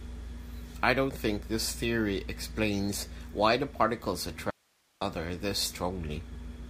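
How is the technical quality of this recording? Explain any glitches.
There is one glitch, an audio dropout to a faint residue. From 4.50 to 5.01 s, right after "explains why the particles", the speech cuts off abruptly and for about half a second only hiss remains, roughly 40 dB below the normal signal level, before the speech snaps back in at "other this". The likely cause is a momentary loss of the source signal while the recording chain kept running, so its own noise floor filled the gap.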